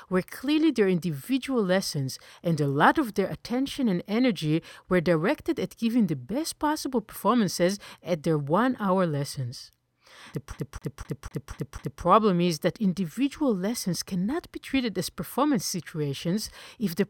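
At 10.53 s the audio sticks like a CD stuck on one turn. A 0.25 s slice repeats six times with short mutes until 12.03 s.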